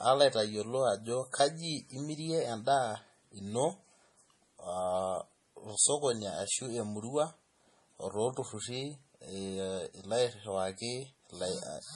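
It's a speech clip with nothing above about 11.3 kHz from start to finish, plus the smeary, swirly texture of heavy MP3 coding. That's most likely low-bitrate audio saved at a high bitrate: something like a 32 kbit/s MP3 re-encoded much higher, which can't restore what was lost.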